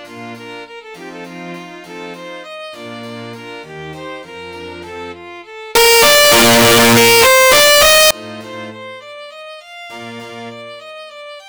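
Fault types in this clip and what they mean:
Signed and unsigned mixed up: from 5.75 to 8.11 s the sound becomes a loud, harsh roar, likely from 16-bit samples read with the top bit flipped, so each zero crossing jumps across the full range. Unlike ordinary clipping, the quiet moments are as loud as the rest.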